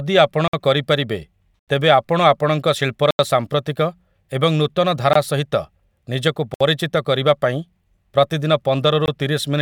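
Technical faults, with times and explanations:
0.48–0.53 s, 1.59–1.68 s, 3.11–3.19 s (after "ଆପଣଙ୍କ ଶିଳ୍ପର"), 5.13–5.15 s, 6.54–6.61 s and 9.06–9.08 s: block of digital silence. The speech drops to silence for 21 to 85 ms. Several lengths are 1024- and 4096-sample blocks, which fits buffers likely not filled in time.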